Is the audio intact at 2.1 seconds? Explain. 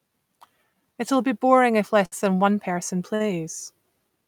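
No, there is a short stall from a late packet between 2.05 and 2.14 s. A packet arrived after its playout time, so the jitter buffer ran dry, and the receiver filled about 64 ms by extending the last stretch of speech until the data turned up. Playback then resumed from the same point, so nothing is lost, but everything after this point runs 64 ms later. It sounds like a syllable held unnaturally long, with a faint buzzy or dipped quality.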